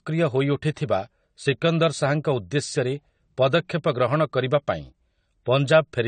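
Throughout the speech, a low-bitrate encoder has likely starved the signal of bits, which fits AAC compression at around 32 kbps. Nothing remains above 9 kHz, so the sound is dull and smeared, with fizzy sibilants and a warbling texture on sustained sounds.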